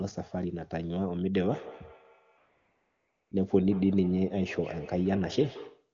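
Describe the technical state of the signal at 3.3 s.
At 3.3 s two faults overlap. A feedback echo between two devices runs from 1.4 s to the end at 5.93 s. A second device in the room replays what the first device's microphone sent, the microphone picks it up again, and the echo canceller can't remove sound it didn't play itself. Each sound returns roughly every 150 ms, thinner and ringier, peaking about 17 dB below the speech. On a spectrogram this shows as faint, evenly spaced copies trailing each onset. On the waveform it appears as a comb of decaying repeats.

The moment also sits at the very end of an AMR comfort noise stretch from 2.37 s to 3.31 s, a 940 ms gap in which no speech frames were sent. The receiver filled that gap with synthetic noise built from a rough level and spectrum estimate, so the true background gives way to a smooth, steady hiss that switches off abruptly at 3.31 s. 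A spectrogram shows a flat, featureless noise band with hard vertical edges at both ends. The waveform shows a uniform low-level floor.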